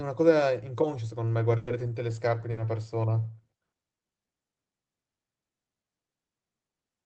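At 1.57 s a burst of packet loss hits the speech: packets stopped arriving, so the receiver stretched the last sound for about 100 ms, fading it into a held buzz or hiss, and about 60 ms of speech is simply skipped. Playback resumes around 1.70 s. The same happens at 2.51 s, with about 60 ms concealed and 60 ms missing before it resumes at 2.60 s.

Each time, a lost packet is rebuilt from error correction: the decoder plays the low-bitrate copy carried in the next packet, so 1.67 to 1.73 s and 2.57 to 2.63 s have no gap but sound rougher and noisier than the surrounding Opus audio, which tops out near 8 kHz.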